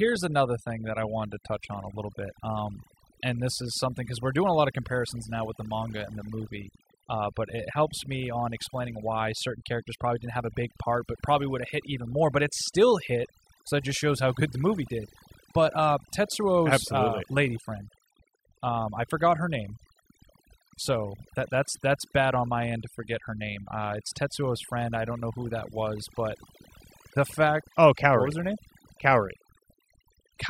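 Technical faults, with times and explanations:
Throughout, overdone noise removal: the gaps between phrases fall to near silence scattered with small twinkling specks. Noise reduction set too strong has cut each frequency band sharply down or off whenever its level came close to the estimated noise, taking the quieter parts of the voice along with the noise. Unlike a noise gate, which shuts everything at once, this works band by band, leaving isolated tonal blips behind.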